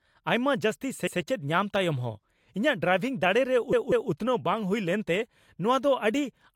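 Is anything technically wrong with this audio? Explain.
Yes. The speech has repeated frames in two places. At 1.07 s, a 128 ms stretch plays one extra time. At 3.73 s, a 192 ms stretch plays twice more, adding 384 ms. The decoder replays the same compressed frames, so each spot stutters and the clip runs longer.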